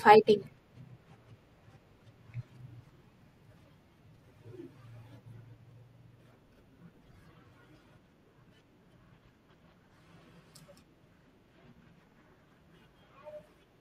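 At 9.06 to 9.11 s and again at 12.11 to 12.16 s, overlapping chunks make the speech stutter with a click. Each 3-second block starts before the last ends, so about 50 ms plays twice. On a waveform, that brief segment visibly repeats, with a vertical seam on the spectrogram.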